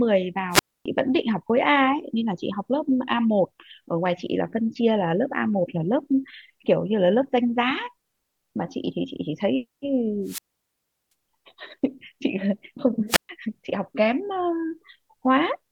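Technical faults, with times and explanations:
0.51–0.86 s, 10.23–11.12 s and 13.08–13.29 s: wireless microphone squelch dropout. The radio link fades. Hiss rises briefly, then the receiver's squelch shuts the output. Near silence follows for about 0.27 s, 0.73 s and 0.13 s. The speech then returns.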